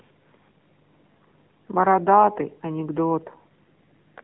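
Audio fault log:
throughout, AMR narrowband mobile codec: The speech is thin, boxed-in and audibly coded, with a buzzy, synthetic edge and nothing above 3.8 kHz. The line band runs from roughly 150 Hz to 3.6 kHz. AMR-NB samples at 8 kHz and rebuilds the voice from a vocal-tract model excited by a few pulses every 5 ms, so upper frequencies vanish. The clear coding damage fits one of its lower bitrate modes, around 7.4 kbps.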